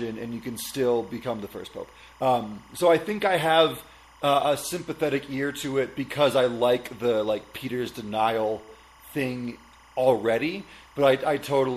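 Linear timecode from a neighbouring track or cable is leaking into the audio for the whole clip. Its square wave, running at 25 frames per second, flips between pitches near 1 and 2 kHz, giving a steady chirping warble roughly 30 dB beneath the speech.

Throughout, the speech carries plainly audible codec damage, likely from MP3 compression at a bitrate around 64 kbps. With so few bits, the encoder drops weak frequency detail that flickers in and out between frames, leaving a watery, swirling texture and smeared consonant attacks.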